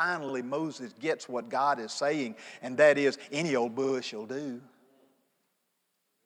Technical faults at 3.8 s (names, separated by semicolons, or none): repeated frames